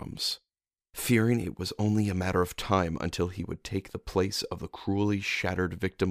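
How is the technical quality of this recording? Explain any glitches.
The technical quality of this recording is sound, with no glitches to explain.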